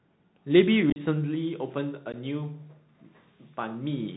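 Bluetooth CVSD headset codec, throughout the speech: the one-bit delta coding, which fits a 64 kbps link, cuts everything above 4 kHz, leaves a granular hiss under the voice, and makes s sounds scratchy where loud high energy outruns the adapting step size. Unconcealed Bluetooth headset packet loss appears at 0.9 to 1.0 s, where about 45 ms is missing across 60 ms with a longest gap of 37.5 ms, and again at 2.12 to 2.14 s, with 15 ms gone. These are dropped headset voice packets replaced by silence or an idle pattern, leaving abrupt holes after which the speech returns briefly quieter.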